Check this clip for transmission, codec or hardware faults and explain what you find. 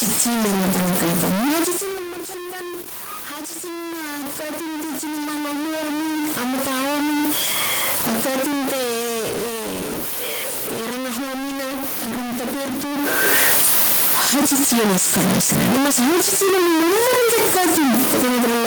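Three faults are audible. There is a grainy quantisation fault throughout, plus automatic gain control swings.

Low bit depth without dither runs through the whole clip. The speech is coarse and gritty, and the distortion follows each syllable. The error sits only about 10 dB below the speech. This fits very few bits, likely around 3-bit truncation without dither.

Automatic gain rising happens from 3.31 to 7.4 s. The input drops by about 12 dB, and the gain climbs about 10 dB to compensate. Speech and room noise swell together slowly.

Automatic gain falling happens twice. From 7.93 to 9.89 s, the gain drops about 5 dB. From 12.94 to 14.27 s, it drops about 3 dB. Each time, the speech and its background sink together.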